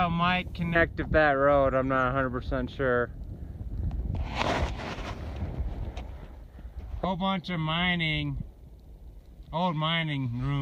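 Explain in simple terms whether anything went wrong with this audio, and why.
Listening to it, nothing went wrong that can be heard; no part of the audio stood out as a problem.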